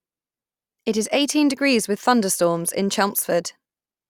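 Nothing goes wrong anywhere in this bit of speech, so there's no fault to point to at any moment.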